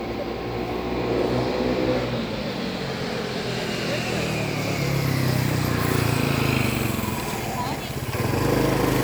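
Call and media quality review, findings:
No audible transport or processing faults found; the sound signal shows no dropouts, timing disturbances or level anomalies anywhere in the capture.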